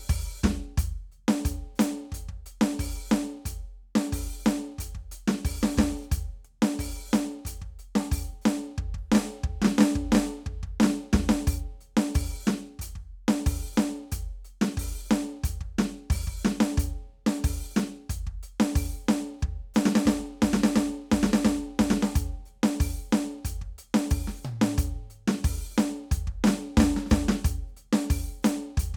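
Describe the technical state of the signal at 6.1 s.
At 6.1 s the music plays through intact, with no dropout, distortion or other fault present at that point.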